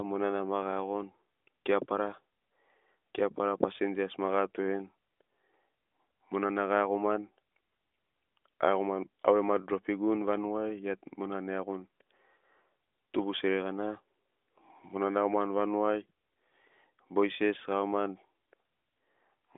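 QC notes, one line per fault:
Nothing stood out on listening to this speech, and no fault was found to log.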